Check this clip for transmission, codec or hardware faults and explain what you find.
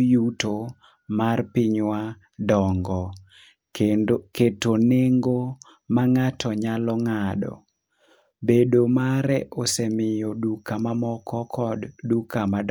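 Nothing to report: no audible fault anywhere in the speech.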